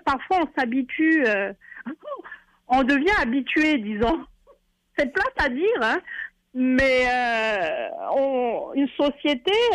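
No technical faults can be heard anywhere in this audio.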